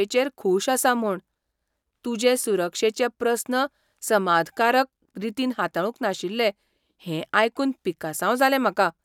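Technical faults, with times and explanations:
No technical faults detected.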